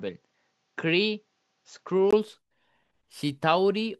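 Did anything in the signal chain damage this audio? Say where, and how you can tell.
Yes. From the start to 2.13 s, the speech sounds like an input switched to a poorer device, at the capture stage before any processing. In that stretch nothing reaches above 7.6 kHz, the level sits roughly 5 dB lower, and a fresh noise floor runs about 50 dB under the signal. At 2.13 s a 20 ms gap precedes full bandwidth returning. The likely cause is the system changing microphones mid-recording, each device imposing its own band limit, gain and hiss.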